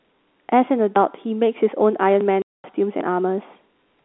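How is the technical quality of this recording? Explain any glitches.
The speech has four discontinuities: three forward jumps and one silent gap. It is carried over a telephone-band channel, G.711 A-law, limited to roughly 250 Hz to 3.6 kHz.

At 0.96 s and 2.21 s, and again at 3.01 s, the sound skips ahead with no silence. The likely cause is a dropped buffer (overrun): samples were overwritten before being read, and the remaining edges were butted together. The first two jumps lose roughly 30 ms. The third loses around 70 ms.

From 2.42 to 2.64 s there is packet loss filled with silence. The receiver played silence where 220 ms of audio failed to arrive, which fits eleven 20 ms packets. The result is a hard-edged hole that cuts out the speech entirely.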